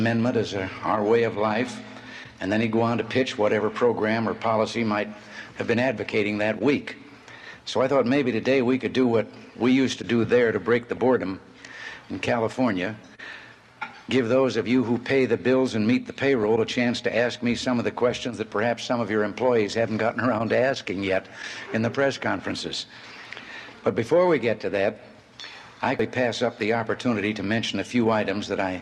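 The audio has DAB burbling in two places. At 10.97 s there is a tiny burble. From 16.43 to 16.7 s a longer run of burbling sits over the programme. Weak reception let bit errors slip past error correction into the MP2 data. Wrong samples put short noise blips in single sub-bands, and wrong scale factors, where they got through, made sub-bands jump in level for up to a frame. The short blip fits a few damaged frames. The longer patch fits well over a dozen. The error rate was only a small fraction of a percent.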